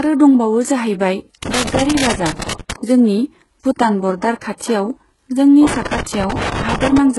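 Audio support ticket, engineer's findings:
Treble across the whole clip is heavily damaged: grainy, metallic sibilance and nothing above 11.5 kHz. Likely HE-AAC compression, with the character fitting a very low bitrate, around 12 kbps. The upper band isn't real signal. It's lower bands copied upward by spectral band replication and shaped by a coarse envelope, so harmonics don't line up across the crossover and s sounds come out gritty or lispy. Probable component: the encode stage.

Loose connector crackle at 1.43–2.76 s, an irregular scratchy burst ending just before "जोंनि भुटान बर्दार". Second burst at 5.67–6.98 s. Looks like a worn or dirty contact making and breaking as it moves, chopping the signal. Any DC on the line turns into pops. Probable component: a cable or jack. Reseat or swap it.

Pre-echo at 4.58–4.61 s, shortly after "जोंनि भुटान बर्दार": about 30 ms of hiss smeared ahead of an attack. 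A second one at 6.03–6.06 s, about 33 ms, lands inside the second crackle burst. The transform codec spreads quantisation noise evenly across its block, so noise sized for the loud attack also fills the quiet moment before it, and the onset sounds soft.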